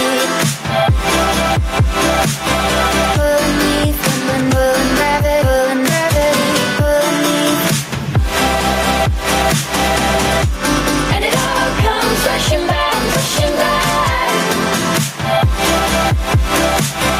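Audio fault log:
Throughout, gain pumping: the gain ducks by around 10 dB under each loud sound, leaving loud and soft parts squashed close together. The likely cause is gain set far too high, with a fast limiter clamping down on every peak.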